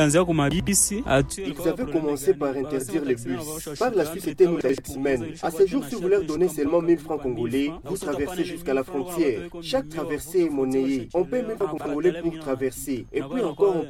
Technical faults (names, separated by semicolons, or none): chunks out of order